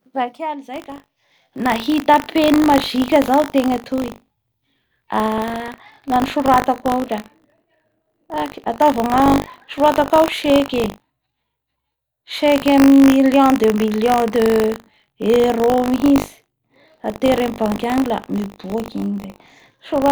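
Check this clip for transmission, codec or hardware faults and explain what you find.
Buffer tearing is present from 0.72 s to the end. Writer and reader cross each 20 ms period, splicing in a small slice of audio about 70 ms old. The result is a steady 50 Hz robotic buzz on the speech.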